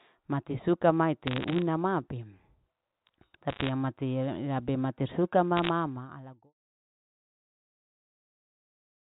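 Bit errors on a digital phone line appear from 1.23 to 1.62 s, after "mati suka", then 3.49 to 3.69 s and 5.57 to 5.69 s. Flipped bits in the mu-law stream at a rate under one percent corrupt single samples, producing sharp ticks and brief crackle over intact speech.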